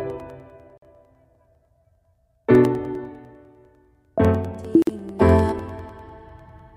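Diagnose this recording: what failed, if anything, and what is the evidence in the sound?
The driver or buffer stage failed with periodic USB or driver dropouts. From 0.1 s to 6.69 s, a tick recurs every 0.1 s, about seventy in all. Each is roughly a millisecond of signal replaced by silence. A background task is stalling the audio path on a fixed schedule.

The codec or storage stage shows a gap at a join of encoded pieces. A 48 ms gap opens at 0.78 s, and a 49 ms one at 4.82 s, four seconds apart. Sound drops out with smeared edges and resumes where it left off. Separately encoded pieces were joined untrimmed, keeping encoder delay and padding.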